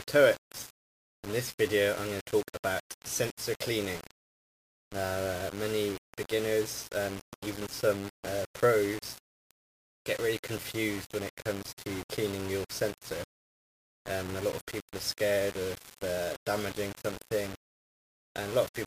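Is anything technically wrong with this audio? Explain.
Yes. Throughout the clip the sound carries a coarse, grainy distortion that shifts with the signal, harshest on quiet passages. This is likely low bit depth without dither: samples rounded to very few levels, fitting about 5 bits, leave error only about 15 dB below the signal.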